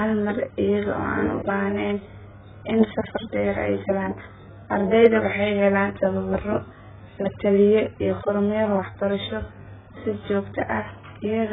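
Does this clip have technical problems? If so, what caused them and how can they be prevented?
Yes. Throughout, the speech sounds dull and warbly, likely from heavy AAC compression discarding detail; a spectrogram shows a hard ceiling at 3.7 kHz, which suggests a bitrate around 8 kbps. Encoding at a much higher bitrate would prevent this.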